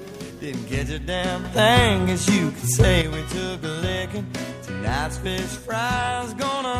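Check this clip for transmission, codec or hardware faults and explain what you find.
There's one fault here, a sudden gain jump. At 1.45 s the level steps up by about 9 dB in a single instant, holds there, and drops back at 3.02 s. The likely cause is a digital gain setting, or a bit shift, being applied with no ramp, so the change lands between one sample and the next. You can hear it because the sound and the background noise rise and fall together, in lockstep.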